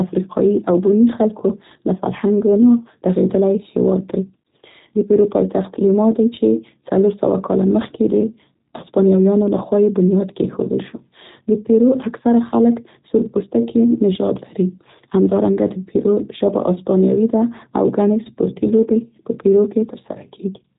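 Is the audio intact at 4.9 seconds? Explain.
No. At 4.9 seconds the speech carries G.729 codec damage, which runs through the whole clip. The codec rebuilds each 10 ms frame from a vocal tract filter, a pitch estimate and a few pulses, so the sound comes out rough, buzzy and slightly synthetic, in a way that fits an 8 kbit/s stream. On a spectrogram everything stops sharply near 3.8 kHz, and the harmonics look smeared and grainy rather than clean.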